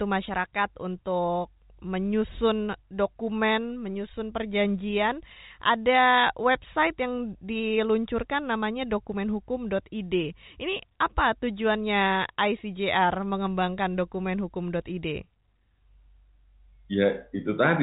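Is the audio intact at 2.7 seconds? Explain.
Yes, at 2.7 seconds the speech runs on without any dropout, click or distortion, carried through the G.711 telephone coding with its band ending near 3.8 kHz.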